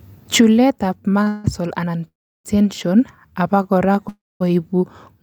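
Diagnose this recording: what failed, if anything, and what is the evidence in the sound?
A short stall from a late packet hit the network path: the jitter buffer ran empty at 1.23 s, so the receiver held the last sound for 29 ms before resuming intact.

A call audio freeze, likely from packets held up in transit, starved the buffer three times: 1.28–1.46 s (158 ms of fill), 2.08–2.46 s (364 ms, fading to 340 ms of silence), and 4.09–4.42 s (315 ms, with 230 ms of silence). Speech resumes where it stopped each time.

A jitter buffer slow-down from 3.39 to 3.93 s repeated pitch periods to rebuild its reserve, adding 64 ms and running at 89% speed, so sounds drag at unchanged pitch.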